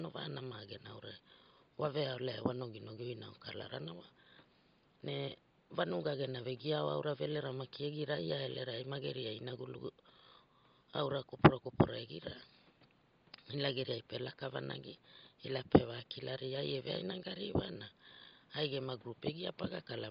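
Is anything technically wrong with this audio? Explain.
Yes. Throughout the speech, the upper band sounds breathy and grainy. This is likely Bluetooth LC3 compression at a low rate, near 32 kbps with 10 ms frames, replacing discarded treble with noise. The room noise sits about 32 dB below the speech.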